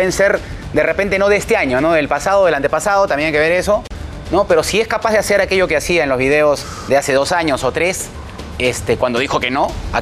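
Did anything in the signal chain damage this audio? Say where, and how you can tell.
No, nothing in the chain seems to have harmed this audio, and there's nothing here worth chasing.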